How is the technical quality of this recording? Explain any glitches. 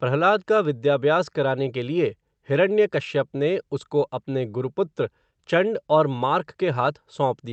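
The speech shows no glitches or defects, and its high end stops around 8 kHz, as expected from a call codec such as Opus running at wideband settings.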